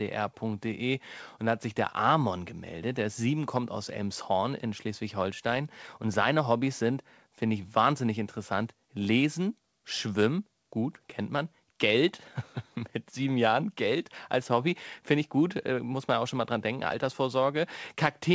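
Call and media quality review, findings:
No audible faults found.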